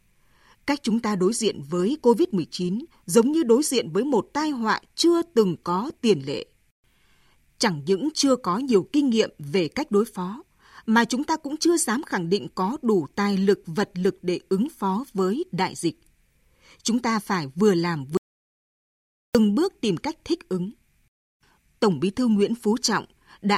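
From 18.17 to 19.35 s, an audio dropout to silence cuts the speech mid-flow, likely from lost input. The waveform flatlines and the spectrogram goes blank, with no room tone.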